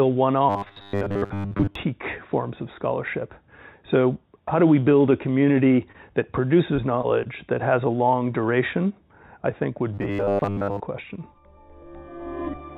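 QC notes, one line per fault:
0.49 to 1.75 s and 9.94 to 10.80 s: robotic sound from repeated short buffers. New audio likely arrived too seldom, so playback kept looping a 10 ms slice while real audio was skipped, most of each span being repeats. The loop imposes a rigid 100 Hz metallic buzz.
5.92 s: short concealed packet loss. About 20 ms of audio never reached the decoder in time, and the receiver bridged the hole by extending the preceding sound for roughly 21 ms before blending back, heard as a brief smear or wobble.
6.49 to 7.27 s: repeated packet loss (robotic sound). Four separate gaps, the longest 21 ms, dropped about 40 ms of audio that concealment stretched to cover, so the passage turns choppy with small pieces missing between patched stretches.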